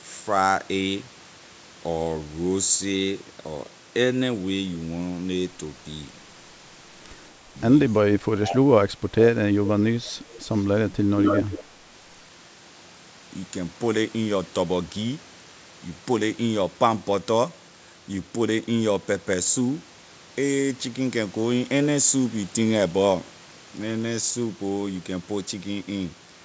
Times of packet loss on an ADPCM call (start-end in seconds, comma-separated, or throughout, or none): none